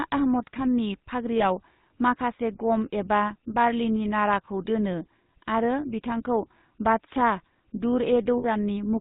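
From start to finish the speech has a buzzy, gravelly roughness and a dull top with nothing above 4 kHz. This is the GSM full-rate codec, which rebuilds the voice from a vocal-tract model driven by regularly spaced pulses, at a rate that fits 13 kbps.

At 1.38 s to 1.6 s, and again at 8.38 s to 8.45 s, the sound freezes into a rough, metallic ring. These are lost GSM frames: the decoder repeats the last good frame's settings. The first gap fits one 20 ms frame and the second about 60 ms, or three frames.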